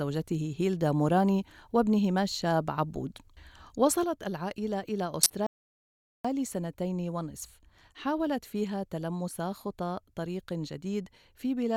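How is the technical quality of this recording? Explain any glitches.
The recording has three clear technical faults.

From 4.04 s to the end, one channel drops out. The level falls abruptly by 6 dB, the expected result when one stereo side is lost and the other is summed to mono. The likely cause is a failed channel feed. Anything present only on the lost side vanishes with it.

At 5.23 to 5.31 s, a corrupt frame is decoded. Damaged bits in a few compressed frames were played as if valid, so misread codes put energy at wrong frequencies. The result is a short, fairly loud burst of chirpy noise lasting about 80 ms.

From 5.47 to 6.25 s there is an audio dropout to silence lasting 0.78 s. The sound cuts off mid-flow into silence with no room tone, then resumes. This likely comes from a brief loss of input while recording continued, and whatever occurred in that gap is gone.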